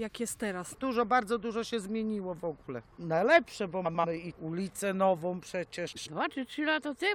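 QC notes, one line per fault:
3.85–4.05 s and 5.87–6.07 s: frames out of order. Each stretch lasts about 0.2 s. It plays as two blocks of about 93 ms with their order swapped. This causes a garbled flutter. No time is lost.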